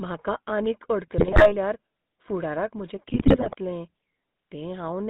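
GSM full-rate codec damage runs from start to finish. The coder models the vocal tract as a filter and drives it with a sparse train of regularly spaced pulses, keeping only every third excitation sample. That coarse excitation gives the speech a plainly audible buzzy, gravelly roughness, consistent with the 13 kbps full-rate coder. The band is confined to roughly 150 Hz to 3.7 kHz, so the lows are thin and everything above 3.7 kHz is gone.

GSM bit errors strike from 1.18 to 1.54 s, right after "म्हाका आनीक", and again from 3.08 to 3.55 s, after "फुडाराक म्हजें". Corrupted bits reached the decoder, scrambling the filter, pitch and gain values frame by frame. Each bad frame warps the spectrum or throws the level out of line, so the speech breaks into squawks, pops and gargling. The second burst is longer and denser.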